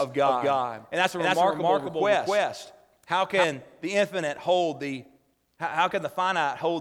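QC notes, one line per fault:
0.00–3.44 s, doubled audio track: from the very start the speech is heard twice, a second full-band copy trailing by roughly 300 ms at about the same level as the original. It is likely a second capture through a slower path mixed back in. Unlike an echo or room reverb, the copy has no decay or added room colour, and it cuts off abruptly at 3.44 s rather than fading away.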